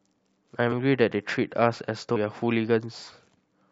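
Compressed frames skipped at 0.71 s and 2.15 s: the speech jumps ahead by roughly 150 ms, then roughly 200 ms, consistent with several whole 23.2 ms frames going unplayed.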